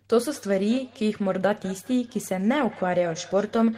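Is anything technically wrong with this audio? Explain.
Yes. From 0.35 s to the end there is feedback echo between two devices. A second device in the room replays the call, the first device's microphone picks that up again, and neither echo canceller removes the other's output. Each word returns roughly a fifth of a second later, about 20 dB below the speech. Unlike a smooth reverberant tail, it is a distinct repeat at a fixed interval.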